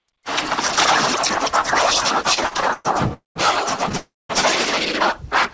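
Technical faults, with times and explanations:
2.30–3.12 s, repeated stalls (stutter): ten short hold-ups, the longest about 114 ms, each patched by stretching the last sound, so it drags and stutters without losing anything.
3.14–3.37 s, call audio freeze: audio stops and a fading buzz fills about 219 ms, mostly silence, then carries on where it left off; likely packets held up in transit.
3.97–4.31 s, call audio freeze: same again but longer, about 320 ms filled, fading to silence before resuming, so nothing's lost, just a gap inserted.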